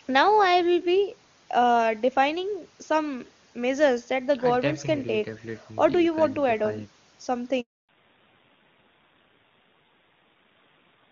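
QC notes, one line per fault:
7.61–7.89 s, handover gap: the speech cuts off abruptly and leaves about 280 ms of dead silence before sound returns. The call was passed between networks, and no speech frames arrived while the link switched, so whatever was said in that window is gone.
7.89 s to end, fallback to narrowband: after the gap the speech turns muffled and rougher, with nothing above 4 kHz. The call dropped from the crisp HD Voice AMR-WB stream to narrowband coding, and the grainier texture fits a low rate around 7.4 kbit/s.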